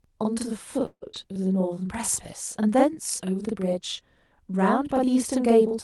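Speech clip with a channel delay (doubling) throughout. One channel trails the other by about 42.7 ms, which fits a 2048-sample buffer, and the mono sum gives an equal-level slap echo on every syllable. From 0.85 to 1.04 s there is a call audio freeze. The last sound is stretched into a fading buzz that ends in about 70 ms of silence, and then the audio resumes where it stopped, about 165 ms late and with nothing lost. The likely cause is packets held up in transit that emptied the jitter buffer. At 1.12 to 1.15 s a skip ahead drops roughly 70 ms, and the two sides are joined almost directly after a brief fill. From 1.26 to 1.76 s a jitter buffer slow-down repeats pitch periods to rebuild reserve, adding 62 ms. The audio runs at about 89% speed with unchanged pitch, and the sounds are drawn out.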